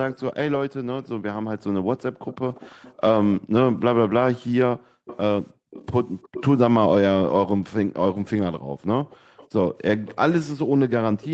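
From 0.11 to 6.43 s there's an echo leak: a faint trailing copy of the speech, sitting roughly 15 dB under it and arriving 330 ms late. That's most likely a far-end loudspeaker whose echo canceller let part of its own playback back into the microphone.

Between 1.47 and 5.7 s, and again from 8.58 to 9.37 s, the background is gated by the echo canceller. While it suppressed the mic, the room sound plunged by up to about 40 dB. In each stretch that adds up to somewhere around 0.7 s of brief dropouts that snap back.

The echo leak returns from 9.1 to 11.27 s, quieter this time at roughly 20 dB down and lagging 362 ms. Again, that's a residue the canceller failed to scrub, heard as a ghost behind the speech. The whole clip is band-limited at 8 kHz, as usual for this Opus call path.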